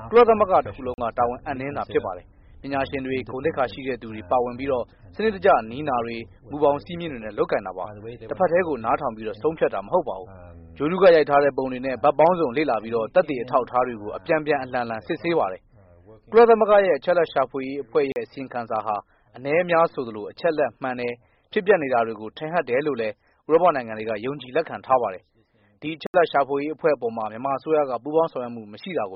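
At 0.94 s the audio drops out for 40 ms, and the same thing happens at 18.12 s, then again at 26.07 s for a longer 74 ms. Each one is a block of digital silence: a run of samples was replaced by silence, most likely because the output buffer wasn't filled in time. There's no fade at either edge. The two short ones come across as a short hole, and the last is a longer hole.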